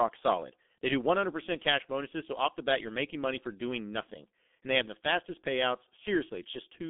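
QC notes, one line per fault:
Throughout: G.723.1 codec. The speech is confined to a telephone band of roughly 200 Hz to 3.5 kHz, so it sounds muffled, and heavy coding damage adds a hoarse, rough texture and smears the consonants. The coarse voice model updates only every 30 ms frame, which fits a bitrate around 6 kbit/s. Unlike a simple band-limit, which leaves the voice clean but thin, the hoarseness and blurred onsets point to low-rate coding.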